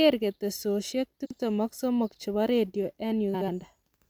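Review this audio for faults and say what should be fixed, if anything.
Two spots of frames out of order in this speech, at 1.25 to 1.40 s and again right after "che bo redio", at 3.34 to 3.48 s. In each, two neighbouring runs of frames got swapped before decoding, so a short stretch plays its halves in reverse order. The first swapped block is about 93 ms, which fits runs of about four frames. The second is about 70 ms, which fits about three. You hear a garbled flutter, and no time goes missing. Worth fixing by making the receiver reorder frames by sequence number before they reach the decoder.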